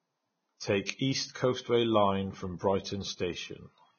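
Throughout the speech the treble is hissy and grainy, nothing is heard above 6.6 kHz, and attacks sound blurred. This is likely heavy Vorbis compression at a low bitrate, around 17 kbps: the codec cut the top band and quantised the remaining high detail so coarsely that it turned into noise.

From 0.86 to 0.89 s a hiss runs ahead of a sharp onset for about 36 ms, softening its edge. This is pre-echo: quantisation noise spread across a whole transform block, filling the quiet moment before the attack.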